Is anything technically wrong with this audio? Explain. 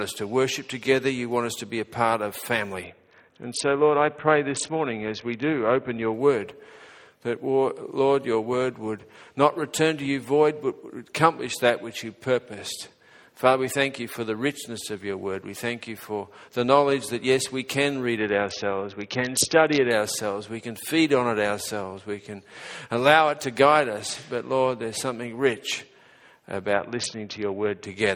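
Yes. A Bluetooth SBC bit pool drop occurs at 2.84–6.14 s, 18.17–19.91 s and 26.73–27.84 s. The treble dulls and gritty noise rises. Starved of bits, the encoder drops the high sub-bands and quantises the rest coarsely, consistent with a bit pool falling from 28 to 6.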